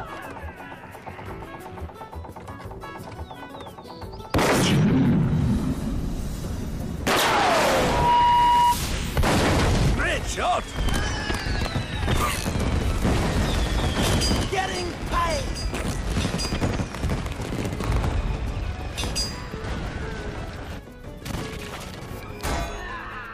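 Loudspeaker feedback squeal from 7.82 to 8.78 s: the microphone is picking up its own loudspeaker, and at 962 Hz the loop gain passes one, so that tone swells over roughly a third of a second into a piercing squeal about 10 dB above the surrounding sound.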